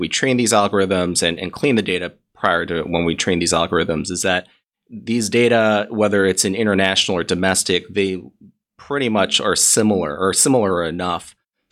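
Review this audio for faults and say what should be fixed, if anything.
Brief crackles break onto three speech peaks: a single click at 2.46 s, between "and clean the data" and "to when we train"; a burst from 6.84 to 6.93 s just after "data whether it's in"; and another from 7.47 to 7.52 s just before "they pretty". This is hard clipping. Peaks overshoot the stage's maximum by about 2 dB, about 1 dB in the last case, and their tops are sliced flat, spraying high harmonics. Leaving a few decibels of headroom through every gain stage would prevent it.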